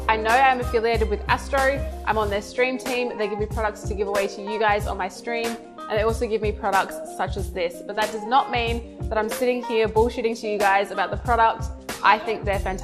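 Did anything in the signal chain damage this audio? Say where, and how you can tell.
Yes. Throughout, the audio is dull and gurgling; a spectrogram shows upper bands flickering out in blocks, likely MP2 compression at a low rate near 80 kbps.

DAB burbling at the reception stage, 10.32 to 10.37 s: a brief burst of burbling as sparse bit errors put short blips of noise in single sub-bands, seen as isolated bright spectrogram blocks.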